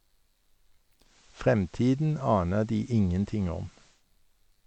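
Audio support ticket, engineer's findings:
Digital radio blending to analogue, 1.0–4.05 s: 178 ms crossfade to FM, hiss floor around 30 dB down, waveform level unchanged.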